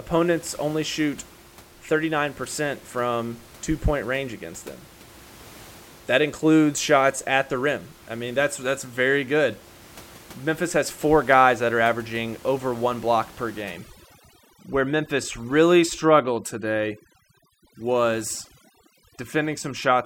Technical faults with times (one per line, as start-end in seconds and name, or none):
13.62-20.06 overdone noise removal